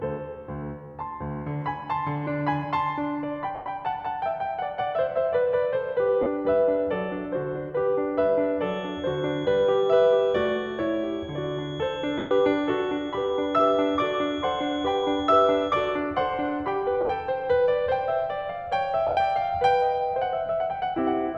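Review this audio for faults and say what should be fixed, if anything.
In the music, brief spots turn into a noisy, blurred smear where tones lose their pitch and the longer ones fade toward silence. These are lost LE Audio frames at 3.55 to 3.66 s (110 ms), 6.23 to 6.26 s (30 ms), 12.18 to 12.31 s (130 ms), 17.01 to 17.09 s (50 ms lost in short bursts over 80 ms, longest about 20 ms) and 19.07 to 19.17 s (90 ms over 100 ms, longest about 70 ms). The LC3 decoder fills each gap by repeating the last spectrum with random signs and fading it as the gap lengthens. Improving the Bluetooth link, with less distance, less 2.4 GHz interference and more retransmission headroom, would prevent these dropouts.

From 8.58 to 16.03 s a thin, steady whistle at 3.3 kHz sits behind the music, about 20 dB below it and swelling and fading slowly in level. This is a feedback whistle. The likely cause is a loudspeaker-to-microphone loop held right at the point of feedback, so that one frequency keeps ringing without running away. 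Lowering monitor gain, moving the microphone away from the speaker or notching 3.3 kHz would prevent it.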